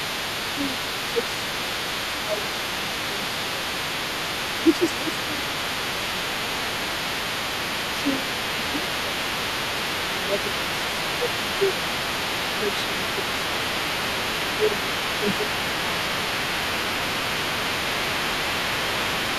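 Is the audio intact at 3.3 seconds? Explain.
No. The other side's voice leaks through across the whole clip, from 0.0 to 19.38 s, only a little quieter than the talker, likely because the echo canceller left loudspeaker pickup in the microphone. Speech is also suppressed in double talk from 0.56 to 3.93 s. With both sides talking at once, the canceller likely turns the talker down too, so the voice dips by up to about 10 dB for roughly a second and a half in all.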